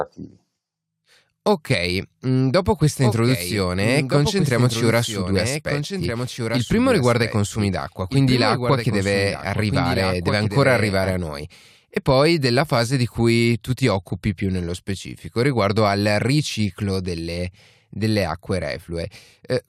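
After "mm dopo questa", from 3.0 to 11.1 s, the speech repeats about one and a half seconds later, about 5 dB quieter. This doubled audio track likely comes from a second, slower capture path. It stops abruptly before "a noi".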